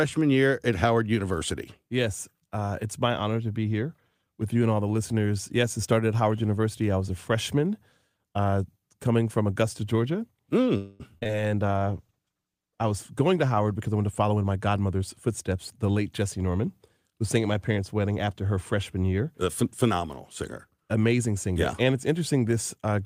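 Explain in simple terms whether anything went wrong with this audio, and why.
Several things go wrong in the middle of this speech clip, and once near the end.

From 10.77 to 11.02 s there is a call audio freeze. The sound stops moving forward for about 0.22 s. The last sound is stretched into a fading buzz or hiss. Then the speech carries on from where it stopped, with nothing lost. The likely cause is packets held up on the network, so the receiver ran out of audio and had to wait.

Right after that comes short concealed packet loss, at 11.18, 11.23 and 11.27 s. Each time, a few hundredths of a second of the call never arrived. The receiver patched each hole by continuing the sound it had just played. These patches are heard as quick smears. A very short sound could slip away inside them.

From 11.64 to 13.72 s there is a call bitrate drop. The connection seemed to get weaker, so the sender squeezed the speech much harder. 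The sound turns rougher, more watery or more muffled. It is at its worst for about a second.

Next there are two jitter buffer speed-ups. From 13.72 to 15.53 s the speech runs about 10% fast. That sounds hurried, but the pitch does not rise. A second, milder one runs from 21.53 to 22.09 s at about 6% fast. In both cases the receiver had built up extra waiting audio. It trimmed tiny slices out of the speech to catch up, about 0.2 s in total the first time and only a sliver the second time.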